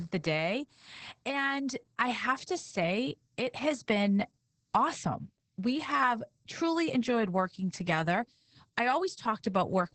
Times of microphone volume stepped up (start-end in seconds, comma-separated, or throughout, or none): none